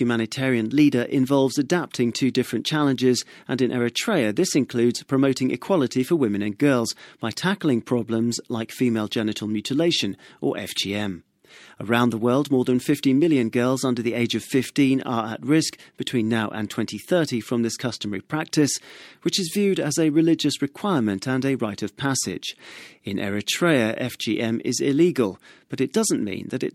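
A speech recording with nothing technically wrong to point to anywhere in it.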